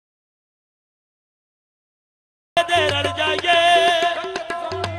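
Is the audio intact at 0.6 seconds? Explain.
No. At 0.6 s the clip is inside an audio dropout to silence that is already under way when it opens and lasts until 2.57 s. The input was likely lost while the recorder kept writing silence. There is total silence with no room tone, a dead-flat waveform and an empty spectrogram, until the sound cuts in abruptly.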